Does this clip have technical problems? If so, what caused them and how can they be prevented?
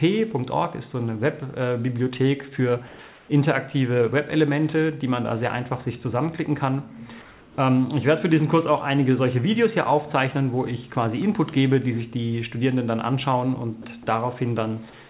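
Yes: comfort noise in place of the background at 2.87–2.99 s, 3.08–3.29 s and 7.22–7.58 s, likely from discontinuous transmission. A steady, featureless hiss replaces the real background, unlike dropouts, which leave silence. Disabling DTX on the sender prevents it.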